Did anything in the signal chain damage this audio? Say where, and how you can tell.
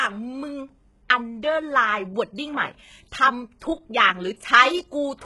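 Yes, at the codec stage. Throughout the speech the treble stops at about 11.5 kHz and is heavily damaged: sibilants sound gritty and metallic. This is likely HE-AAC compression at a very low bitrate, around 12 kbps. Spectral band replication copies lower bands upward, so the treble isn't simply missing as with a low-pass filter. It is present but rebuilt, and its harmonics don't line up.

Also at the codec, a pre-echo at 1.09 s: a short hiss of about 13 ms sits just ahead of a sharp attack, which sounds softened. The transform block spread its quantisation noise into the quiet moment before the onset. Reverb or an echo would trail the attack rather than precede it.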